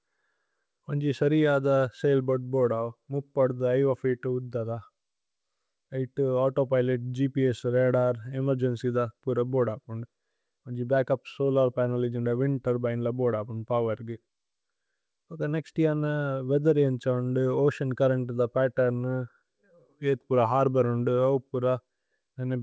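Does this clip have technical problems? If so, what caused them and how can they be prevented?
No, there are no technical faults in this speech clip. It has come through a call path whose audio stops at 8 kHz, which fits a wideband codec such as G.722.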